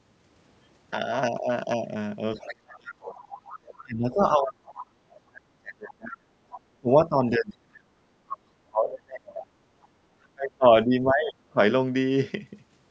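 Speech suppressed in double talk occurs at 2.36 to 3.31 s, 3.83 to 4.66 s, 5.09 to 6.34 s and 6.81 to 11.57 s, with the level falling by as much as about 40 dB at its deepest. The echo canceller was likely unable to tell the local talker from loudspeaker echo, so it pulled both down. The speech dips or drops out in pieces.

The other side's voice leaking through appears at 2.38 to 2.48 s, 2.89 to 3.83 s, 4.45 to 4.85 s and 6.50 to 6.59 s, sitting about 20 to 25 dB below the speech. This is likely far-end audio from the loudspeaker that the canceller failed to remove, heard as a second voice in scraps.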